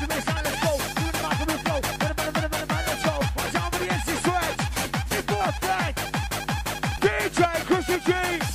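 At 3.20 s, 5.40 s and 6.97 s, compressed frames are skipped. The decoder drops several 26.1 ms frames, so the audio jumps ahead by about a fifth of a second, about 0.15 s at 6.97 s. Each join is a short smeared blip rather than a click.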